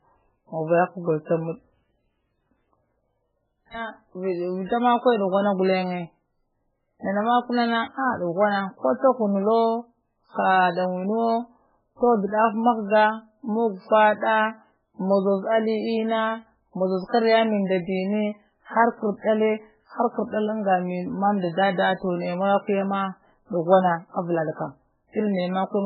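MP3 compression damage runs through the whole speech recording, likely from encoding at a very low bitrate, with heavy artefacts that fit a rate around 8 kbps. Starved of bits, the encoder has cut the treble outright, leaving nothing above about 5.2 kHz. It has also discarded weak frequency lines, which flicker in and out between frames. The result is a dull, watery, swirling texture, with sibilants turning metallic and chirpy, and consonant attacks smeared.

Pre-echo appears from 3.70 to 3.74 s, a hiss about 42 ms long arriving just ahead of a sharp onset. The codec spreads its quantisation noise across an entire transform block, so when a loud attack lands late in that block, noise scaled for the loud part also fills the near-silent stretch before it. The attack therefore sounds softened, announced by a brief smear of noise rather than starting cleanly.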